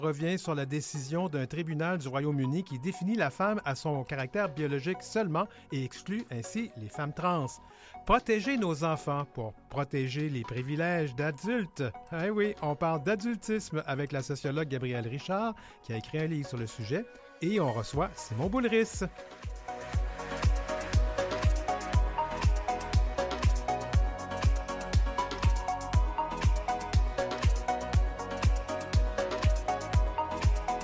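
No dropouts, clicks, distortion, level jumps or other technical faults are audible anywhere in this audio.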